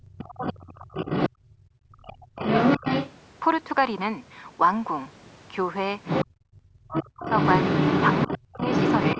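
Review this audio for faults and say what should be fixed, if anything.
The talker's speech drops away almost to silence from 0.00 to 2.42 s, 6.32 to 7.26 s and 8.27 to 8.61 s. This is speech suppressed in double talk, likely because the echo canceller ducked both voices.

A second voice, about as loud as the talker and somewhat louder at 2.41 to 3.12 s, comes through at 0.35 to 1.30 s, 6.05 to 6.26 s and from 6.93 s to the end. This is the other side's voice leaking through, likely loudspeaker echo left in the microphone.

A better-tuned echo canceller with stronger double-talk detection, or a headset instead of a loudspeaker, would prevent both.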